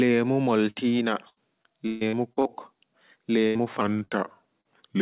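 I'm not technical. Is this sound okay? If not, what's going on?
No. The sound has four kinds of problem, all in speech carried over a call connection.

First, a burst of packet loss happens three times: at 0.70 to 0.77 s, 3.47 to 3.57 s and 4.05 to 4.13 s. Each time, a run of the small pieces that carry the call arrived too late or not at all. The receiving end covered each hole by stretching out the last bit of sound and letting it fade. You hear a short held buzz or hiss, and then the speech jumps ahead with a piece gone.

Second, repeated packet loss (robotic sound) runs from 1.29 to 2.47 s. Seven separate holes fall close together there, the longest about 0.14 s. Roughly a third of that stretch is patched-in filler rather than real speech. Because the patches keep coming, the voice turns choppy, like a robot, and bits of it drop out.

Third, short concealed packet loss occurs at 3.57 to 3.61 s, 3.97 to 4.03 s and 4.61 to 4.67 s. 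Each gap is only a few hundredths of a second. The receiver smoothed over it with a guess based on the sound just before, so you hear a brief smear or wobble, and a quick consonant may simply vanish.

Fourth, there is a section at the wrong speed, from 3.81 s to the end. That part plays at about 87 percent of its proper speed, so the voice comes out slower and deeper, roughly three semitones lower. This is likely because that section was played back against the wrong clock. The slowdown is heard together with the last few dropouts above.

The call connection itself is an ordinary telephone-quality path. It carries nothing above 4 kHz, which gives the voice its familiar phone-line sound.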